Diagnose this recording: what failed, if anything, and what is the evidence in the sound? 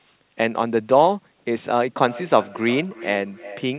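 Feedback echo between two devices, from 1.98 s to the end of the clip at about 3.8 s, is a call-processing fault. The speech returns at a fixed spacing of roughly 400 ms, peaking at about -18 dB relative to the direct speech. A second device in the same room is playing this talker's audio aloud, and the first device's microphone picks it up again. Each canceller removes only its own playback, so that round trip survives. The sound is band-limited with nothing above 4 kHz, which fits a narrowband G.711 call path.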